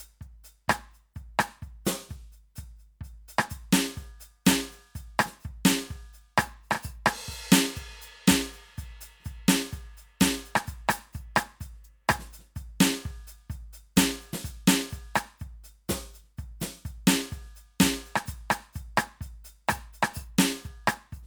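Nothing goes wrong anywhere in this music, so there's no fault to point to at any moment.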